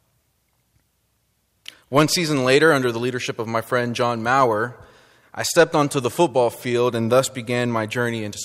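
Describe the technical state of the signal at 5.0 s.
At 5.0 s the speech signal is intact, with no audible technical fault.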